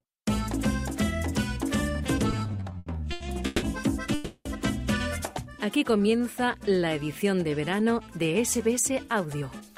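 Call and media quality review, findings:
Repeated stalls (stutter), 2.31–3.64 s. Fourteen stalls, longest 160 ms, about 430 ms concealed, roughly a third of the span. Jitter buffer repeatedly ran dry on late packets; receiver extended the last sound. Nothing lost, audio drags.

Call audio freeze, 4.14–4.47 s. Sound stretches into a fading buzz or hiss for 310 ms, ending in a near-silent moment of about 10 ms, then resumes where it stopped. Likely packets held up in transit, emptying the jitter buffer; adds 310 ms delay.

Jitter buffer slow-down, 5.66–6.85 s. Playback at 93% speed, pitch unchanged, about 92 ms added. Receiver rebuilt its buffer reserve by repeating single pitch periods and slices of pauses; sounds drawn out.

Jitter buffer speed-up, 8.91–9.61 s. Playback at 105% speed, pitch unchanged, around 40 ms trimmed. Excess buffered audio; receiver cut short pitch-period segments in succession to shed delay. 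Sounds hurried.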